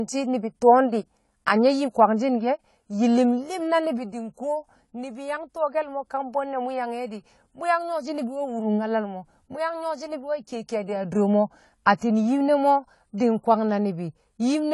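From start to finish the speech carries what is likely AAC compression: the damage is plainly audible, with dull, smeared sibilants and a warbling texture. A simple low-pass filter would cut the top cleanly without that fizzy, shifting grain, which fits a low bitrate around 32 kbps.

From 13.18 to 13.20 s comes pre-echo. The codec's quantisation noise is spread across its block, so a short hiss leaks about 21 ms ahead of a sharp attack and blurs its onset. Unlike a click or reverb, it arrives before the sound it belongs to.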